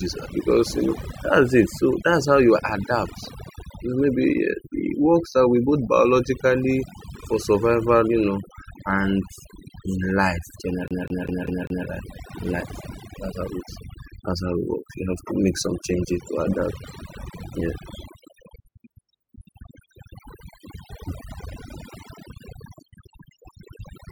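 A noise reduction stage set far too aggressively runs across the whole recording, an overdone noise removal that pulls individual frequency bands down or out whenever they sit near its noise estimate. The quieter components of the speech get caught along with the hiss, so the background drops and breaks up into twinkling specks, and the voice has its softer detail eaten away from start to finish.

From 10.88 s to 11.87 s, just after "in life", the playback behaves like a CD stuck on one turn: the pickup jumps back to the same point on each rotation instead of moving forward. A slice of about 0.2 s plays five times in a row, with a brief mute at every jump, producing the quick, evenly spaced stutter of a skipping disc before the speech carries on.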